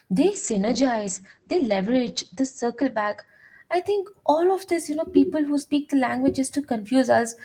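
From 0.32 s to 4.15 s there is a call bitrate drop. The call's bandwidth estimate fell, so the encoder had to spend far fewer bits. It coded the speech more coarsely and trimmed the top end. Brightness above 8 kHz disappears, where it had reached about 20 kHz. The speech turns muffled, rough and watery. The worst stretch lasts about 2.02 s and fits a rate near 10 kbps, down from roughly 32 kbps.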